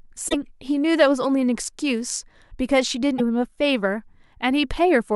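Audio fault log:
0.28–0.35 s and 3.18–3.21 s, broken MP3 bit reservoir: the speech briefly garbles and skips ahead. Likely cut frames left the next frame reading another frame's data.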